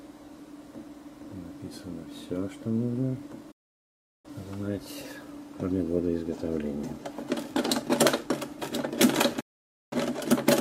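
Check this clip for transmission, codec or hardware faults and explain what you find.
Two faults, both digital broadcast dropouts. At 3.51 to 4.30 s and 9.40 to 9.96 s, valid frames stopped arriving and the receiver muted. Sound fades out within 8 ms and later resumes, with the material from those gaps lost.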